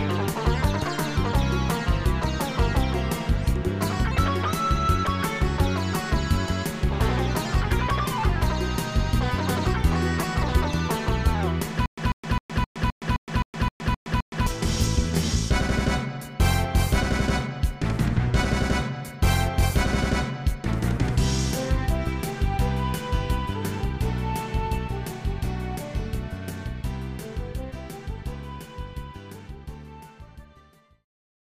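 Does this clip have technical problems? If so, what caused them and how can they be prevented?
Yes. From 11.86 to 14.47 s there is a stutter with silent gaps: a 143 ms fragment repeats 10 times, each followed by 117 ms of silence, a 261 ms cycle. This likely comes from playback stalling, replaying the last buffered fragment at each retry, so the intervening audio is lost. It can be prevented with larger playback buffers and steadier delivery to the player.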